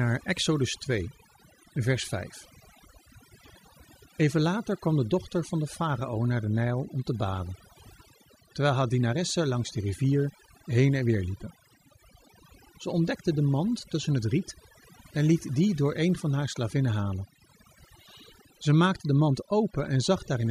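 Speech recording with overdone noise removal throughout: a noise reduction stage set too strong pulls individual frequency bands far down or out whenever they sit near its noise estimate. The background falls away into twinkling, warbling specks, and quieter parts of the voice are removed along with it.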